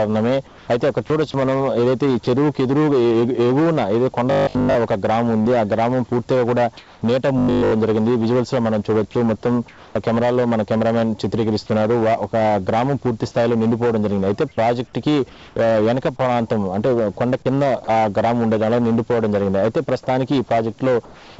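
At 0.47 to 0.68 s the background gives way to comfort noise. The real room sound is replaced by a steady, featureless hiss. It sits about 2 to 3 dB quieter than the true background, which runs about 25 dB below the loud passages. The likely cause is discontinuous transmission. The sender stopped sending during the pause, and the receiver synthesised noise shaped roughly like what it last heard.

From 2.24 to 2.27 s there is sound dropped by the voice detector. The sender likely took a quiet stretch for background and stopped sending. About 20 ms of real sound vanishes under comfort noise, then returns. It is heard as a tiny hole.

From 4.31 to 4.75 s comes robotic sound from repeated short buffers. Audio arrived too seldom, so the player repeated its last short chunk for most of this stretch. That forces a rigid 50 Hz buzz, which fits a 20 ms buffer. The sound turns metallic but keeps its rough shape.

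At 5.42 to 5.48 s there is a short concealed packet loss. About 30 ms never reached the decoder in time. The receiver extended the last sound over roughly 35 ms and blended back. It is a brief smear.

Comfort noise returns at 6.77 to 7.01 s, about 2 dB down against a background about 28 dB below the loud parts. The robotic buzz follows from 7.39 to 7.73 s. It is again at 50 Hz, but here every buffer is repeated, so the metallic quality is total.

Further comfort-noise gaps fall at 9.68 to 9.95 s and 15.29 to 15.56 s, each about 2 dB quieter than the real background. The voice detector drops sound again from 17.84 to 17.87 s, losing about 20 ms. A last comfort-noise stretch runs from 21.05 to 21.38 s. Throughout, nothing is heard above 8 kHz. That fits a G.722 call path at 64 kbps.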